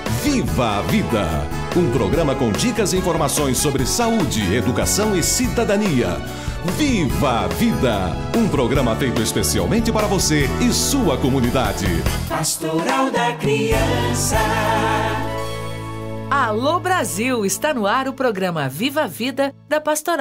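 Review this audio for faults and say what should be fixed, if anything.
Nothing here needs fixing: the signal holds steady and continuous throughout, with no technical faults to correct.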